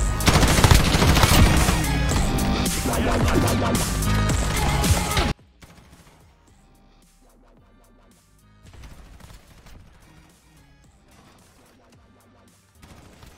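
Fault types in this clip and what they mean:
One channel inverted: From 5.3 s to the end, the sound drops by about 32 dB. Only a small remnant remains. The likely cause is one stereo channel with reversed polarity. Summing to mono then cancelled everything the channels shared.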